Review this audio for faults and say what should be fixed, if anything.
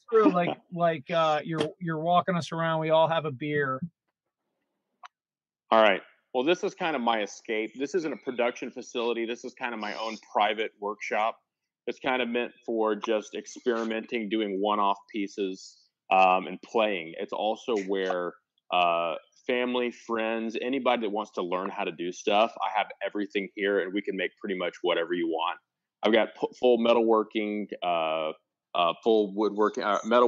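Nothing needs fixing, since no technical faults are detectable anywhere in the signal.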